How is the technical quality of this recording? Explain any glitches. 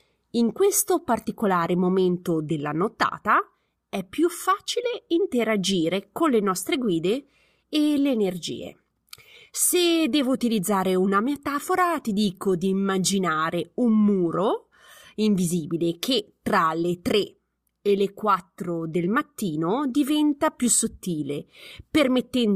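No glitches or technical faults can be heard here.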